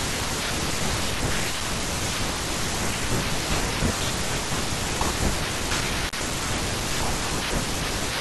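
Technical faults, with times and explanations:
6.07 to 6.15 s, intermittent contact: a loose connection briefly opens for about 37 ms, so the speech cuts out with crackle at both edges and faint hiss in the gap. The crackling edges set it apart from a clean digital dropout.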